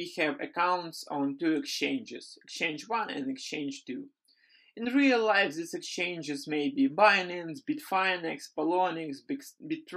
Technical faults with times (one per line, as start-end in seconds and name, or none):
none